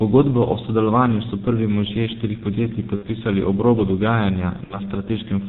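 A short speech recording, heavily mangled by the G.723.1 codec the whole way through. Everything above about 4 kHz is gone, so it sounds muffled, and the coarse 30 ms frames plus a slowly updating voice model give it that hoarse, smeared quality where consonants blur together. The damage is heavy, which fits the low-rate 6.3 kbit/s mode. On top of that there's VoIP packet loss concealed by the speech codec, twice: from 2.96 to 3.08 s and again from 4.64 to 4.81 s. Each time the decoder had nothing to play, so it kept extending its last pitch and filter state with the gain stepping down. You hear the sound stretch into a fading buzzy, coloured tone. The gap is consistent with about 60 ms of audio, or two 30 ms frames, going missing. Since each frame is built on the one before, the voice stays weak and off for a bit after real packets come back, which is why both events run a little longer than the missing audio itself.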